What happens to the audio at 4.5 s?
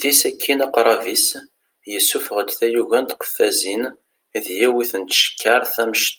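Nothing goes wrong at 4.5 s; the speech carries through that moment intact, with no dropout, click or glitch to be heard.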